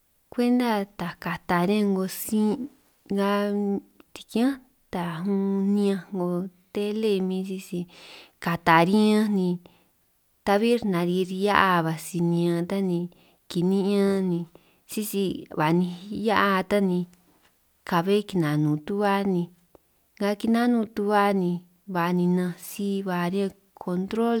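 No technical faults are audible anywhere in this speech recording.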